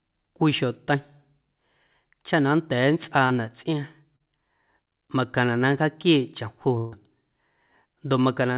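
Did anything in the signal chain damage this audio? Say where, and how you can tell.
Yes. Short concealed packet loss on the network leg: about 40 ms went missing at 3.26–3.32 s and 4.16–4.22 s, and the receiver's extrapolated fill leaves brief smears in the speech.

A burst of packet loss at 6.78–6.94 s dropped about 140 ms. Concealment stretches and fades the last sound before speech resumes further on, over a telephone band ending at 4 kHz that fits G.711.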